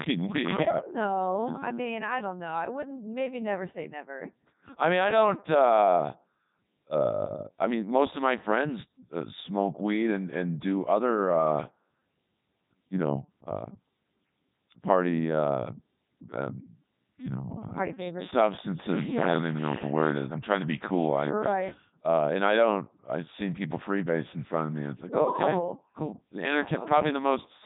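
Throughout, the speech carries heavy Codec 2 vocoder damage: buzzy, robotic sinusoidal resynthesis with nothing above 3.8 kHz, which fits its 3.2 kbit/s mode.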